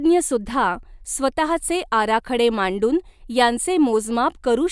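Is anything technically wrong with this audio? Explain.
No, the signal has no audible technical faults: the speech keeps a steady level and an unbroken waveform throughout.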